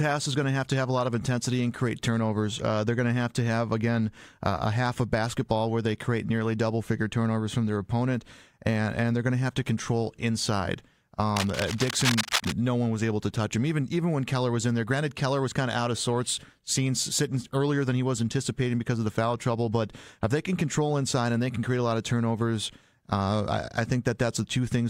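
A speech recording with cable scratch noise from 11.36 to 12.52 s: dense, uneven scratching bursts roughly 5 dB below the speech, likely from a worn cable or connector being moved.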